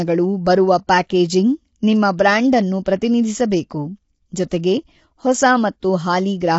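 Speech clip with plainly audible codec damage throughout: the voice sounds rough and grainy and nothing is present above 7.7 kHz, likely low-delay AAC compression at a rate that fits about 24 kbps. At 1.09 s there is pre-echo, a short hiss spreading about 11 ms ahead of a sharp attack, as block quantisation noise leaks into the quieter moment before it.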